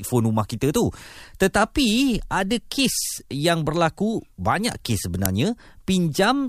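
At 5.26 s there's an uninitialised buffer: the playback grabbed a block before any audio had been written into it, so whatever junk sat in memory went out as samples. You hear a sudden, loud crack, short enough to fit a block of about 5 ms.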